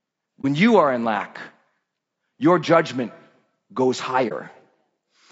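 From the start, the speech has a rough, grainy texture that lasts the whole clip. This is likely low-delay AAC compression, the short-frame AAC variant used for video calls. At its low bitrate, noise fills the gaps between the pitch harmonics. The top band sounds dulled and partly synthetic. The damage is plainly audible and fits a low bitrate of about 32 kbps.

At 0.41 to 0.45 s the sound briefly drops out. This is AAC frame loss with muting. One frame of data was lost, and the decoder replaced its spectrum with silence. Because AAC frames overlap, the sound fades down and back up instead of cutting off sharply. The result is a brief dip of about 30 ms. The same fault happens again at 4.28 to 4.32 s, with the same short, smooth gap.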